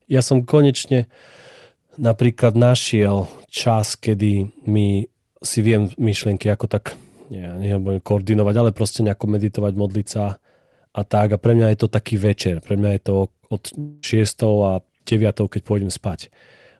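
From 13.79 to 14.05 s the speech dissolves into a fading buzz stretched from the last sound, never reaching true silence, then resumes with about 240 ms lost. A long network dropout is the likely cause; a brief packet loss would only blur a fragment.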